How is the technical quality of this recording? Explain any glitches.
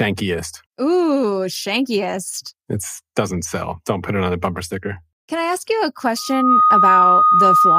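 The recording is marred by a loudspeaker feedback squeal near the end. From 6.16 s until the clip stops at 7.79 s, a steady 1.2 kHz tone swells over roughly 0.4 s to about 10 dB above the speech. A microphone is picking up its own loudspeaker, and at that frequency the loop gain exceeds one. On a spectrogram it shows as a bright horizontal line, and in the waveform as a rising, dense envelope.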